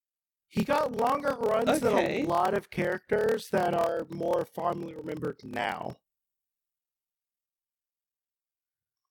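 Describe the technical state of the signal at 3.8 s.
At 3.8 s the speech has a block size mismatch (padded), present throughout the clip. Each written block, which fits 1024 samples, is shorter than the next stage reads. Zeros fill the rest. These gaps buzz at 38.3 Hz. Speech runs at 0.889 speed, timbre unchanged.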